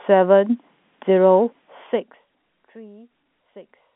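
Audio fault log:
No faults found; the narrow telephone-line band on the speech, with nothing heard above about 3.8 kHz, is normal for the channel.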